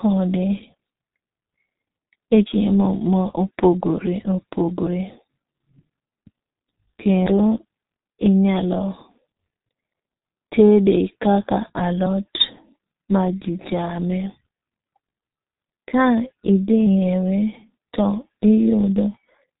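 From start to finish the speech carries the sound of the G.723.1 codec, and it's pretty heavy-handed here. Everything above about 3.8 kHz is simply gone, so the top end sounds closed in and muffled. The coder builds its voice model in coarse 30 ms chunks at a very low rate, roughly what you'd expect around 6 kbit/s, so the voice comes out hoarse, and consonants smear into each other instead of landing crisply.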